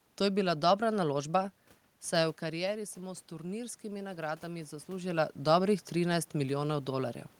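From 2.4 s to 5.17 s the speech and the room noise behind it swell together, the level climbing slowly rather than jumping. This is automatic gain rising. Around 2 s the talker drifts away from the microphone and the input drops by about 9 dB. The gain control reads that as a quiet signal and lifts its gain by about 4 dB over nearly three seconds, pulling the background up along with the voice, until the talker moves again near 5 s.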